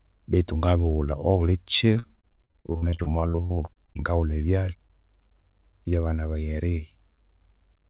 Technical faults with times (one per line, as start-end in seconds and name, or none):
1.94-3.97 repeated packet loss (robotic sound)